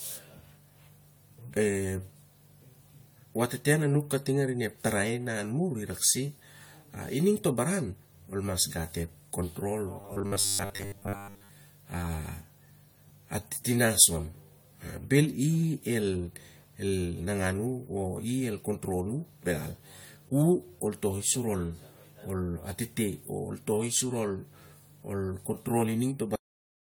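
From start to finish the speech carries generation loss: a swirly, hollow smear, with consonant attacks blurred and softened more than a single lossy encode would leave them. This is likely the result of decoding and re-encoding with AAC-LC about seven times, in a chain pointing to roughly 96 kbit/s, each pass quantising on a shifted frame grid so the errors pile up. A spectrogram would show flickering holes and patchy, mottled energy in the upper bands.

Between 10.01 and 11.51 s the speech turns into robotic sound from repeated short buffers, a rigid metallic buzz at 100 Hz that only loosely tracks the syllables. The likely cause is audio arriving too seldom, so the player loops the last stretch, which fits a 10 ms buffer, while most of the real audio, around seven tenths, is skipped. On a spectrogram this shows as evenly spaced horizontal harmonic lines at 100 Hz multiples, and the waveform repeats identical short cycles.

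At 26.36 s there is a cut-off end. The audio stops mid-sound and drops straight to digital silence with no decay, because the final buffers were never written out. The waveform ends abruptly mid-sound and then lies flat for the remaining half-second. On a spectrogram, energy across all frequencies ends along a sharp vertical edge instead of fading away.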